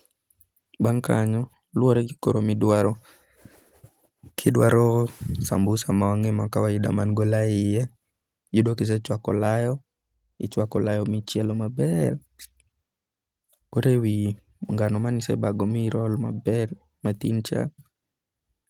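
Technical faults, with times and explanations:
Nothing stood out on listening to this speech clip.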